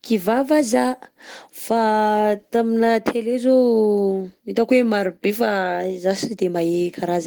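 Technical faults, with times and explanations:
No technical faults can be heard anywhere in the speech, with the signal holding steady and continuous from the first moment to the last.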